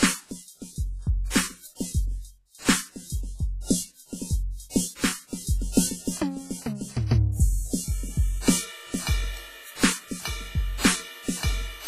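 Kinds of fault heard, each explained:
WMA compression: Throughout the music, the sound is ringing and washy, with a hiss that rises and falls with the signal and nothing above 15.2 kHz. This likely comes from Windows Media Audio encoding, and the heavy damage fits a low bitrate of around 24 kbps. The transform coder quantises each long block coarsely, so noise smears across tens of milliseconds, and quiet spectral lines are discarded outright.
pre-echo: From 5.73 to 5.77 s, a sharp attack arrives softened, preceded by a brief hiss that spreads about 45 ms ahead of it. The transform coder spreads its quantisation noise evenly over the whole block. Because this attack falls late in the block, noise scaled for the loud onset also fills the quiet moment before it, so the hit is blurred and loses its crisp edge.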